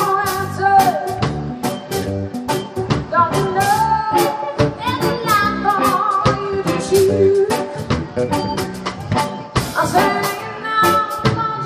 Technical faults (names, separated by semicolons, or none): Bluetooth SBC bit pool drop